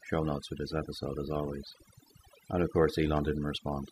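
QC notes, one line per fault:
throughout: overdone noise removal. The noise reduction was pushed too hard. It drives individual frequency bands down or out wherever they sit close to its idea of the noise floor, and it cannot tell quiet speech detail from hiss, so both are removed. Between phrases the background collapses to near silence scattered with brief twinkling specks. The speech loses its softer components.
3.17–3.19 s: loud pop. Straight after "of course" there is a single sharp pop, roughly 10 dB above the speech level, and the speech continues underneath it. The likely cause is a sudden voltage step or spike entering the signal path, such as a connector being disturbed, a switch, a static discharge or a driver glitch. The following circuitry shapes that spike into the short, sharp pop heard here.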